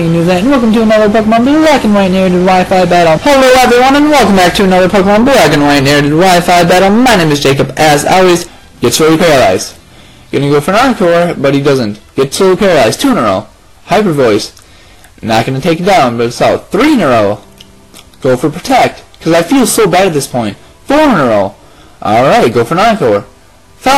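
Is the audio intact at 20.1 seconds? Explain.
No. The signal is driven about 17 dB past what a stage in the chain can pass, so at 20.1 seconds, as through the whole clip, the waveform is hard clipped: nearly a third of the samples hit the ceiling and are sliced flat. Those squared-off tops spray harmonics high into the spectrum, so every loud moment carries a harsh, buzzing fuzz rather than occasional crackle on peaks.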